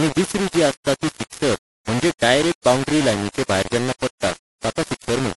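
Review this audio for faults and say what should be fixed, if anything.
Low bit depth without dither runs through the whole clip, from start to end. The speech carries a grainy, gritty distortion that tracks the voice, sitting only about 10 dB below the signal. That points to very coarse quantization, which fits samples rounded to roughly 4 bits with no dither. Each sample snaps to one of a few steps, so the error follows the waveform instead of forming a neutral noise floor. To prevent it, keep the signal at 16 or 24 bits and apply dither whenever reducing word length.

MP3 compression is also present throughout the clip, and its damage is plainly audible. Nothing comes through above 11.4 kHz, so the top of the spectrum is cut off flat, and the speech takes on a watery, swirly quality. This is likely the result of a low-bitrate MP3 encode, which fits something around 48 kbps. Short of bits, the encoder drops weak frequency lines and lets them flicker from frame to frame. 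To prevent it, encode from the original at a higher bitrate or use a lossless format.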